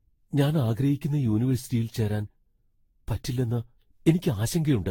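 Throughout the speech there is a swirly, hollow smear, with consonant attacks blurred and no content above about 19.2 kHz. This is generation loss, likely from around ten successive lossy re-encodes, which fits a Vorbis chain near 64 kbit/s, each pass stacking fresh quantisation noise.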